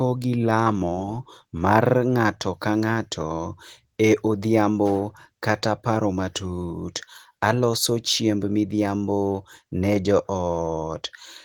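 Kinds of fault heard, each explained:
No faults heard.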